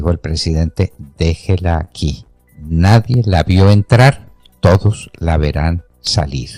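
Between 1.41 and 1.89 s the sound stutters in a run of repeated stalls. Packets arrived late or too slowly, so the jitter buffer emptied four times, and each time the receiver stretched the last sound to cover the wait, adding 56 ms in total, about 12% of that stretch, with the longest gap 22 ms. Nothing is lost, which sets it apart from a dropout: the audio simply drags and hiccups.

At 3.14, 4.75 and 6.07 s there is an abrupt jump in the sound each time, with no silence. The likely cause is a dropped buffer (overrun): the samples were not collected before the hardware overwrote them, so about 10 ms is missing at the first two points and about 20 ms at the last, and the surrounding audio is spliced straight together. Unlike the stalls, these points skip ahead instead of dragging.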